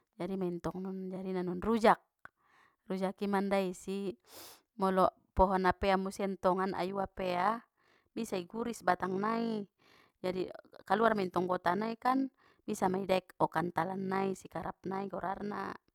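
From 6.88 s to the end of the clip, overlap-add ripple sets in. The speech was processed as windowed frames and then reassembled with an overlap whose windows fail to sum to a steady gain, so each frame boundary leaves a dip or bump in level. The gain swings by about 6 dB around fifty times a second, once per frame, giving the speech a fast, buzzy flutter, a rough robotic tremolo riding over every syllable.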